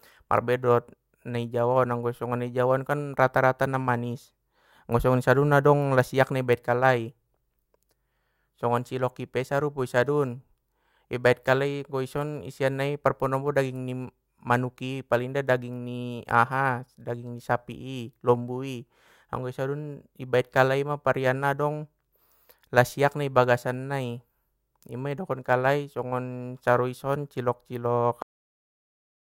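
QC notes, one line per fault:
28.22 to 29.37 s, cut-off end: the final buffers of the recording were never written out or played, so the speech stops abruptly at 28.22 s in the middle of a sound rather than finishing. Instead of decaying naturally, the signal falls straight to digital silence, and that flat silence runs for about 1.2 s until the file ends at 29.37 s, leaving the last sound truncated with no tail.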